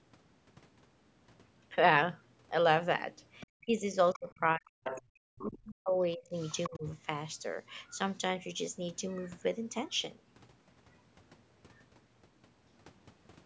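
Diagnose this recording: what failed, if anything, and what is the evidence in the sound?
Call processing, specifically the echo canceller, is the likely stage for the other side's voice leaking through. A faint second voice appears at 3.40–3.47 s, 4.13–4.19 s, 4.84–5.02 s and 6.37–6.69 s, roughly 15 to 25 dB under the main speech. It comes in brief scraps rather than the steady bleed of crosstalk in analogue wiring.

Speech suppressed in double talk shows as dips at 3.61–3.96 s, 4.12–6.33 s and 6.69–6.84 s, reaching about 40 dB at worst while the far side was playing. The likely cause is the same canceller turning down both voices together. These are level drops that track the overlap, not network packet loss.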